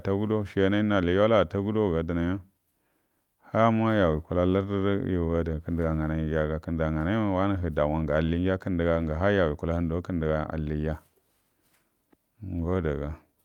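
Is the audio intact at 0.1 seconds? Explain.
Yes, the speech at 0.1 seconds is intact, with no fault of any kind at that moment.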